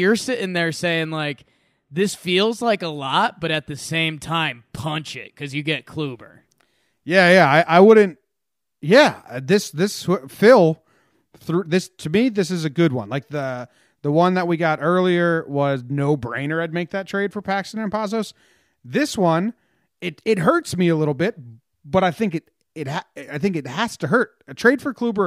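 No audible faults turn up anywhere in this speech recording.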